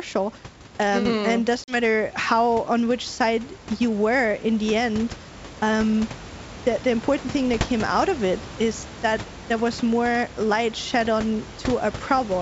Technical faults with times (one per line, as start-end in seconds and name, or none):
1.64-1.76 packet loss on an ADPCM call